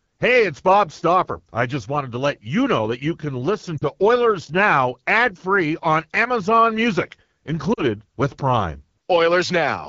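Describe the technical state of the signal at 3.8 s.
At 3.8 s the speech has lost AMR speech frames, from 3.78 to 3.85 s. About 40 ms is missing, which fits two consecutive 20 ms frames. When those frames failed their checks, the decoder carried forward the last good pitch and vocal tract settings at falling gain, so the sound briefly sags toward near silence. Unlike a hard dropout or digital click, there is no abrupt gap. The decay is smooth, and the voice returns a little weak and rough.

The same moment also carries the AMR wideband (HD Voice) codec, which runs throughout at what sounds like the 8.85 kbit/s mode. At this low rate the pulse-excited vocal tract model leaves speech plainly raspy and gritty, and the top band from 6.4 to 7 kHz is filled with shaped noise rather than real detail. This sets it apart from narrowband telephone coding, which cuts off near 3.4 kHz and sounds muffled rather than hissy at the top.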